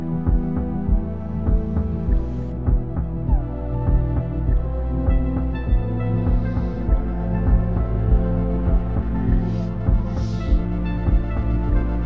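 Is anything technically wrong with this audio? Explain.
No, nothing stood out as technically wrong when listening to this audio.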